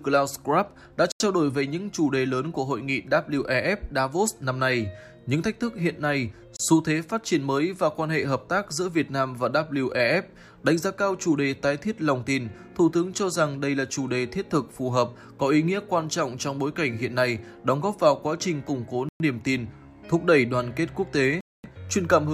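The sound drops to silence four times: at 1.12 to 1.20 s for 84 ms, at 6.57 to 6.60 s for 30 ms, at 19.09 to 19.20 s for 113 ms, and at 21.41 to 21.64 s for 233 ms. Each is a hard cut with no fade. The audio then resumes as if paused. These are likely Bluetooth stalls. Radio interference delays packets. The headphone buffer empties and playback waits for the resent data.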